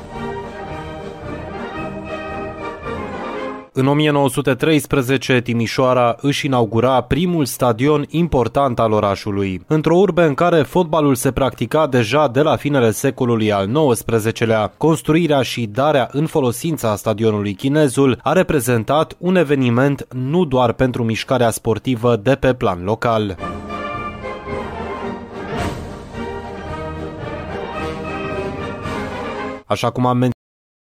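At 30.32 s the audio has a cut-off end: the final buffers were never written to the output, so the sound stops mid-event with no natural decay and drops straight to digital silence for the remaining 0.66 s or so.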